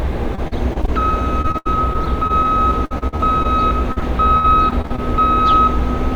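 Repeated packet loss (robotic sound) occurs in four stretches: 0.35–0.89 s, 1.41–2.58 s, 2.85–3.46 s and 3.92–5.00 s. In each, short pieces of the sound failed to arrive, with the longest holes running 37 ms, 74 ms, 54 ms and 65 ms. Each hole was patched by stretching the preceding sound, which filled roughly 19 to 28 percent of each span. Because the holes come in quick succession, the sounds turn choppy, with fragments missing.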